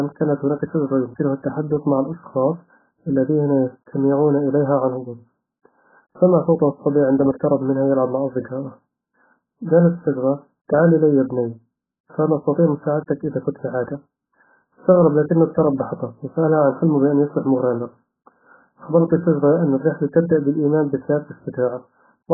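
Throughout the speech, nothing reaches above 1.7 kHz. A spectrogram shows a hard ceiling there with patchy, holed bands beneath it, and sibilants sound smeared and warbling. This is likely heavy AAC compression, with damage that points to a very low bitrate near 8 kbps.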